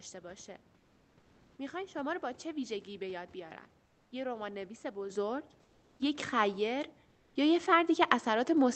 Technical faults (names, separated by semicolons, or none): comfort noise in place of the background; microphone volume stepped up